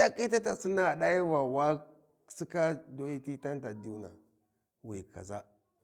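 No technical faults occur at any point in the recording, so there is nothing to describe in time order.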